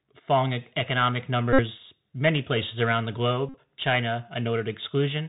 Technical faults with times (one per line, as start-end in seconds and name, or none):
0.00-5.28 Bluetooth CVSD headset codec
1.53-1.61 Bluetooth headset packet repeated
3.49-3.56 Bluetooth headset packet repeated